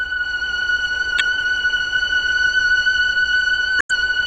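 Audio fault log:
1.17–1.21 s and 3.78–3.96 s, damaged data in a compressed stream: two short faults, the first a brief 40 ms blip, the second a longer one of about 180 ms. Corrupted bytes make the decoder misread frames and lose sync until it finds a valid frame header. Each event lasts while the decoder skips ahead to the next valid frame.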